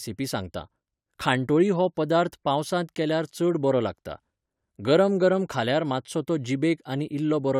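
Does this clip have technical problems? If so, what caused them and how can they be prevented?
No, there's nothing technically wrong to point to here, so there's no cause to track down and nothing that needs preventing.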